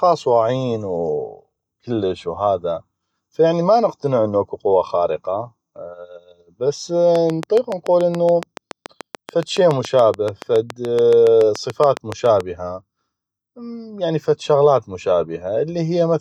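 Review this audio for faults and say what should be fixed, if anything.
A train of clicks runs through the speech from 7.16 to 12.41 s: about forty near-identical pulses at a regular 7.05 per second, peaking roughly 10 dB above the speech. They are likely interference from nearby equipment or a faulty connection or power supply. A spectrogram shows evenly spaced thin vertical lines, and the waveform shows repeating spikes, even in pauses. To prevent it, move the recording gear away from other electronics, and check the interface connection and cabling before recording.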